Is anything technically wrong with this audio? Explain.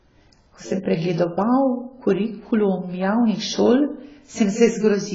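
Yes, the speech carries heavy damage from AAC compression across the whole clip. From start to finish nothing is present above about 7.6 kHz. The sound is dull and smeared, with a warbling, fizzy texture on sibilants and held vowels. The likely cause is AAC-LC coding at a very low bitrate, which fits something around 16 kbps. With few bits per frame, the encoder drops the top band and coarsely quantises what remains, leaving gaps the ear hears as swirl. On a spectrogram this shows as a hard ceiling at 7.6 kHz with blotchy, patchy holes in the upper bands.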